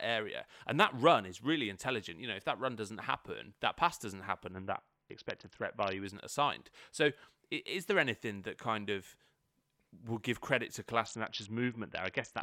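Bluetooth SBC bit pool drop at 4.52–6.05 s and again from 11.06 s to the end: the encoder suddenly gets far fewer bits, dulling the treble and adding gritty noise, which fits a rate near 55 kbps.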